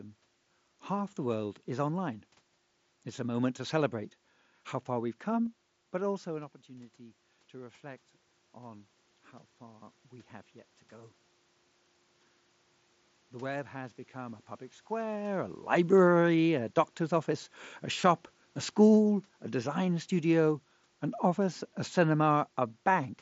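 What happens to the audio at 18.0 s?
At 18.02 s there is concealed Bluetooth headset packet loss: about 15 ms of sound went missing, and the receiver filled the gap by repeating the best-matching stretch of recent waveform.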